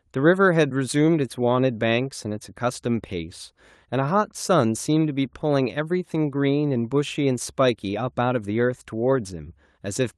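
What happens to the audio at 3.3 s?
Nothing goes wrong at 3.3 s: the speech carries on intact through the call path, with no dropout, glitch or other fault at that moment.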